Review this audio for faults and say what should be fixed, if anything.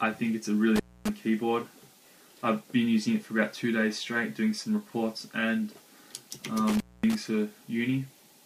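The sound drops out twice, with crackle at the edges of each gap: from 0.76 to 1.09 s, with the line open for about 260 ms, and from 6.69 to 7.15 s, open for about 230 ms. This is an intermittent contact. A loose plug or a cable conductor briefly lost its connection, cutting the signal, and the crackle comes from the contact scraping as it opened and closed. Reseat or replace the cable and connectors, and fit strain relief so they can't shift during recording.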